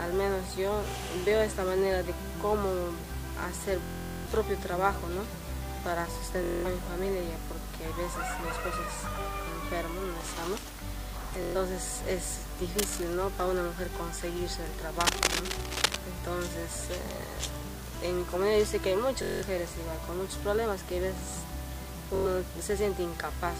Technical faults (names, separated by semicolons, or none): Bluetooth stutter; cable scratch noise